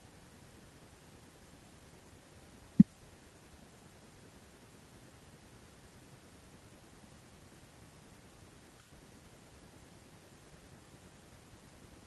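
No technical faults can be heard anywhere in the speech recording. There is nothing to place on a timeline and nothing to trace back to a cause.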